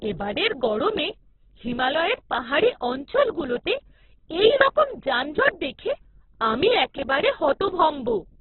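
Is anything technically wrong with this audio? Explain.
Yes. Throughout the clip, the speech was likely squeezed through heavy Opus compression at a starved bitrate. The encoder kept each band's energy but had too few bits for detail, so it filled bands with folded or noise-like content. The bandwidth also collapsed to narrowband, leaving nothing above about 4.2 kHz, which fits roughly 8 kbps in the music-oriented CELT mode. The speech sounds muffled, grainy and rough, with a noisy texture.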